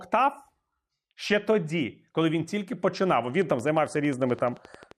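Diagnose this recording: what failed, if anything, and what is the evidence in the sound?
A train of clicks runs from 3.42 to 4.92 s: about twenty regular pulses at 11.4 per second reaching speech level, likely analogue-wiring interference.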